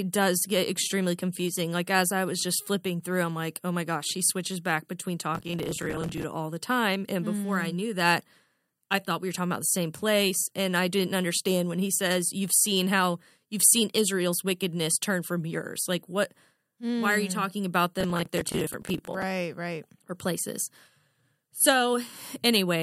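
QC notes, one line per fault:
5.35–6.24 s, processor overload crackle: after "she switches back between", the processor keeps missing buffer deadlines, so dozens of roughly 10 ms slices replay stale audio with hard edges, giving gritty crackle.
18.01–19.23 s, processor overload crackle: same thing after "you hmm talking about", a longer run of missed buffers where old audio is held and repeated, tearing until "right or places".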